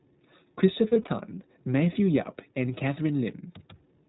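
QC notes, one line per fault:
throughout, iLBC codec: narrowband sound with nothing above 4 kHz, and plainly audible roughness and a synthetic edge from coding each frame's excitation independently. The coding uses the higher iLBC rate, 15.2 kbps with 20 ms frames. The edge sets it apart from a simple low-pass band limit.
0.88–1.09 s, lost iLBC frames: about 100 ms of audio went missing in short runs scattered over 200 ms, none much longer than a couple of frames. The decoder repeated the last pitch cycle with added noise, giving brief held, buzzy vowel-like patches. Because each frame stands alone, recovery is immediate rather than a slow smear back.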